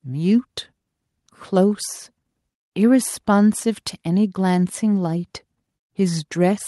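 Nothing in this recording stands out as a technical fault, so there's really nothing to walk through here.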